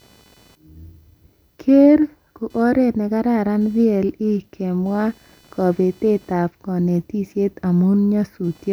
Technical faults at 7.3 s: computer activity noise

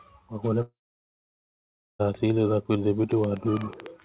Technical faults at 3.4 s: train of clicks

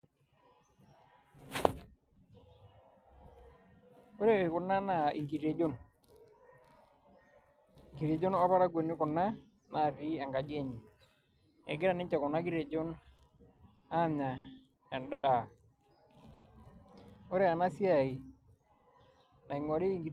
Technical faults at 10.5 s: none

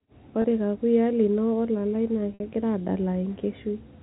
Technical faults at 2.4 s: packet loss with pitch repetition

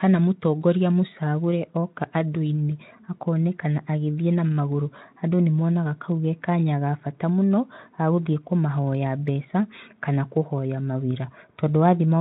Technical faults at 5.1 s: none

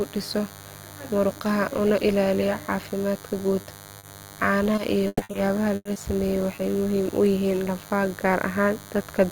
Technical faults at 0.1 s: DECT cordless phone buzz

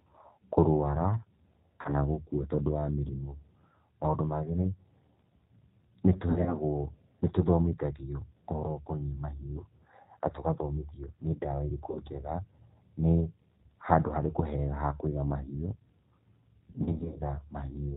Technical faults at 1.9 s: G.729 codec; VoIP packet loss concealed by the speech codec

